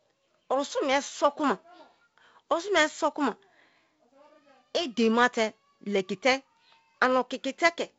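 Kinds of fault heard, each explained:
The speech carries the signature of G.722 wideband telephone coding, with nothing above 7.7 kHz and the slightly noisier lower band that fits a 48 kbit/s mode, and no fault is present.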